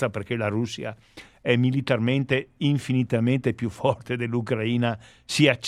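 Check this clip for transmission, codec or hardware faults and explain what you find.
Listening closely to the speech, nothing stood out as a problem.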